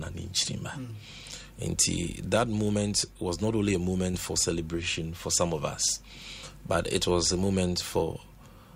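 The audio has one short concealed packet loss at 4.11 to 4.15 s. About 20 ms never arrived. The receiver filled it by extending the preceding sound, leaving a brief smear.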